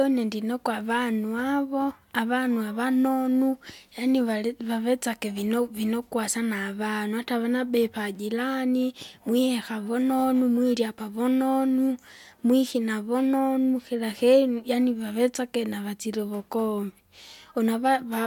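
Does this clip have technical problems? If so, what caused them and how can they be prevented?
No, the signal shows no technical faults, so there is nothing here that needs preventing.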